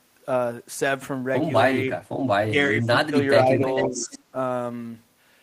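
In this speech recording, an echo canceller likely mistook talk during double talk for loudspeaker echo and turned it down, producing speech suppressed in double talk: the voice drops by about 15 dB at 2.47 to 2.54 s, about 20 dB across 2.70 to 3.14 s, and about 10 dB across 3.45 to 4.34 s. Within that last stretch, from 3.77 to 4.19 s, the canceller also likely left part of the loudspeaker signal in the microphone pickup, causing echo leak. A copy of the voice returns 444 ms late, about 10 dB below the speech.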